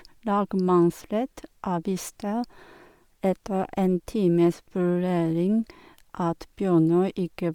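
Speech carrying plainly audible Bluetooth LC3 compression throughout, with a grainy, breathy edge likely from an LC3 link at roughly 48 kbps. Unlike a band-limited recording, content still reaches 20.2 kHz.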